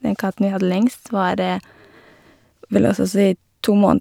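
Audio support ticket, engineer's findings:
No faults found on this clip.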